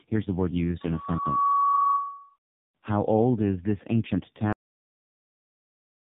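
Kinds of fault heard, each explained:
Tandem speech coding: the call passed through two AMR-NB narrowband coders with a G.711 link between them, so it was decoded and re-encoded at each border. The second coder compounds the first one's losses, leaving the speech rough, muffled and warbly, with nothing above 3.7 kHz.
Cut-off end: the final buffers were never written or played, so the recording stops abruptly at 4.53 s, just after "old is this ancient", mid-sound. It falls straight to digital silence with no natural decay.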